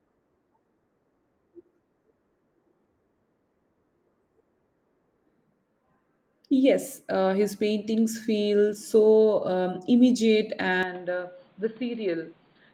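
At 10.83 s the speech abruptly turns dull, about 10 dB quieter, with nothing above 4.6 kHz and faint new noise. The likely cause is an input switched to a poorer device.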